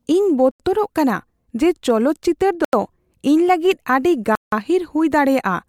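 A short hole punches through the speech at 0.51 to 0.60 s and again at 2.65 to 2.73 s, each about 85 ms. A longer gap at 4.35 to 4.52 s lasts about 171 ms. Each is a block of digital silence: the output buffer likely wasn't filled in time, so it went out as zeros with no fade. The equal lengths fit a 4096-sample buffer, and the last gap spans two.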